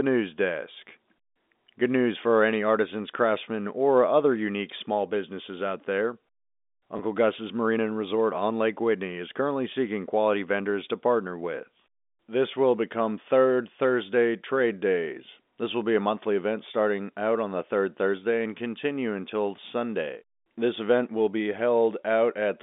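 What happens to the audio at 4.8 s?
Nothing goes wrong at 4.8 s: the speech there is intact, carried on the ordinary telephone band without any dropout, glitch or distortion.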